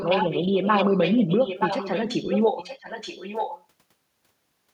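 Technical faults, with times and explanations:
0.0–2.41 s, echo leak: a delayed copy of the speech trails the original by 927 ms, loud enough to sit only a few decibels under it, roughly 5 dB down, so the two overlap and blur. The likely cause is a speakerphone at the far end whose echo canceller failed to subtract what its microphone picked up from the loudspeaker, sending the call back nearly a second late.
2.57–3.64 s, echo leak: the same 927 ms repeat returns but much fainter, about 15 dB below the speech. The cause is the same likely loudspeaker pickup at the far end, with the echo canceller still letting a residue slip back into the call.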